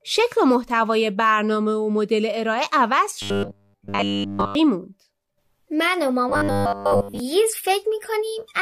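Audio likely arrived too seldom, so playback filled gaps by looping a 10 ms buffer, causing robotic sound from repeated short buffers. From 3.22 to 4.55 s nearly everything becomes a rigid, metallic 100 Hz buzz. From 6.30 to 7.20 s most of the sound becomes that buzz.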